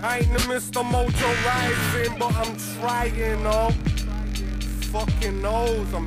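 At 3.01 s mains hum enters and holds to the end: a steady 50 Hz tone with low harmonics, nearly as loud as the sound itself, from power-line coupling. Unlike rumble or wind noise, its pitch and level never waver.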